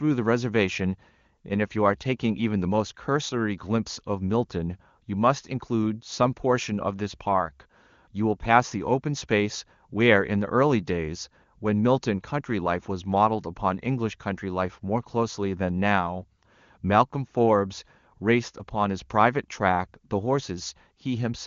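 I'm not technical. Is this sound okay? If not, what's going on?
Yes, nothing is wrong with this speech recording. It has the sound of a call made with the AMR wideband (HD Voice) codec, which is why nothing above about 7 kHz comes through and any trace of the coding is faint at most.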